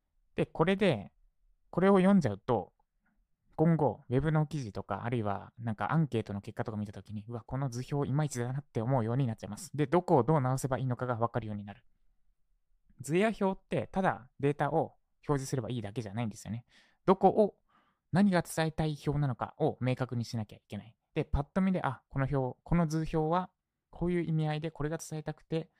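Nothing in the recording stands out as a technical fault: the speech signal carries no audible defect from the transmission, recording or playback chain at any point.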